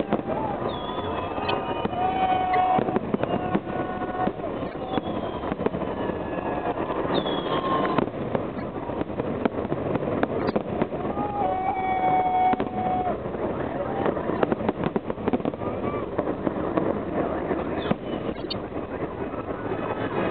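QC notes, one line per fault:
1.48–1.51, 2.53–2.58, 4.66–4.74, 8.54–8.62, 10.39–10.52, 14.35–14.42 and 18.34–18.53 s, corrupt frame decoded: flipped bits in a few compressed frames were played anyway, misplacing energy in frequency, so short chirps and noise bursts peak around -15 to -25 dBFS.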